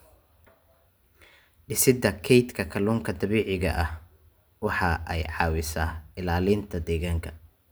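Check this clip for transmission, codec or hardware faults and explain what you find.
Nothing in the speech signal points to a transmission, codec or hardware problem, as its level, continuity and bandwidth hold steady throughout.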